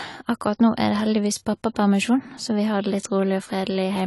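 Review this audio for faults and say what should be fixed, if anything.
The speech sounds dull and smeared all the way through, with a watery, fizzy edge on the sibilants and nothing above 11.5 kHz. That's likely AAC compression. The AAC-LC encoder was short on bits, which fits a rate around 32 kbps, so it cut the top band and coarsely quantised what remained. Encode at a higher bitrate, or keep a lossless master, so the encoder can hold on to the highs.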